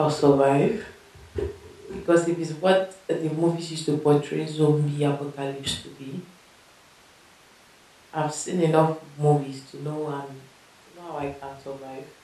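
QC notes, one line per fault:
No faults detected.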